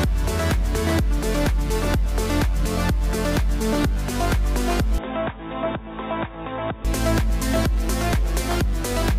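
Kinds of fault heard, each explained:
Input switched to a poorer device: from 4.98 to 6.85 s the sound abruptly loses everything above 3.8 kHz, drops about 10 dB and gains a faint new noise floor, with no gap at the switch, most likely a change of capture device rather than filtering alone.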